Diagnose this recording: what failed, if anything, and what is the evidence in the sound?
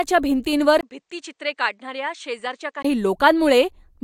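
At 0.81 s the speech drops by about 10 dB after a 20 ms silence, loses everything above 9.2 kHz, and gains a new background noise roughly 55 dB below the signal. At 2.85 s it returns to its earlier fullness. This is likely an input switched to a poorer device at the driver stage. A codec bandwidth cut would not bring its own noise floor, level shift and switching gap together, so a change of capture hardware fits the sound better.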